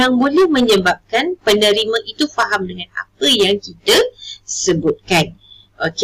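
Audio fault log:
Throughout, hard clipping: the level's pushed about 16 dB past what the chain can carry, so peaks get sliced flat, something like 7 percent of samples. Those squared-off tops throw harmonics way up high, giving a harsh fuzz on every loud moment.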